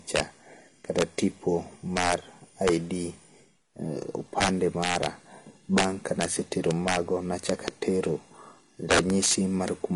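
Throughout the speech, loud peaks set off integer overflow. With the level driven about 7 dB past full scale, a small fraction of samples wrap to the opposite sign, giving violent, sharp cracks rather than the duller, flattened buzz of ordinary clipping.

Across the whole clip nothing reaches above 11.3 kHz, and two kinds of compression smear are heard together. That layering likely comes from transcoding between lossy codecs, consistent with low-bitrate Vorbis followed by HE-AAC, rather than from a single encode.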